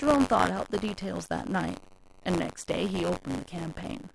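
From start to finish, the writer and reader of the playback ring buffer have slipped out of step, producing buffer tearing: a small slice of each period replays audio about 30 ms stale, with hard joins, giving a robotic buzz near 94 Hz under the speech, which fits a 256-sample buffer.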